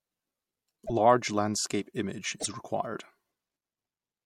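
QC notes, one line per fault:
0.85–0.90 s, broken MP3 bit reservoir: a quick glitch of about 53 ms, roughly two MP3 frames at 26 ms each, where the sound skips ahead. Likely some frames were dropped, so the next frame borrowed reservoir bytes that now belonged to a different frame and decoded nonsense.
2.39–2.46 s, broken MP3 bit reservoir: same thing again, about 70 ms this time, close to three frames, likely from another cut in the frame sequence.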